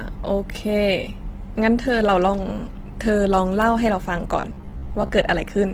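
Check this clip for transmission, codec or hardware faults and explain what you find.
Two faults are audible.

Throughout the speech there is Opus compression, likely at about 16 kbps in music mode. Energy-preserving band filling makes it rough and grainy rather than swirly like MP3.

From 4.40 to 5.11 s there is robotic sound from repeated short buffers. Roughly a third of the audio is repeated short chunks, which imposes a rigid 66.7 Hz metallic buzz. That fits a buffer of about 15 ms. The steady pitch distinguishes it from ordinary dropouts or stutter.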